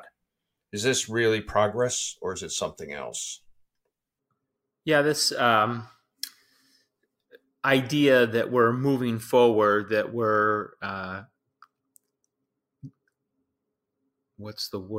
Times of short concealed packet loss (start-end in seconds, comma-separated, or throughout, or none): none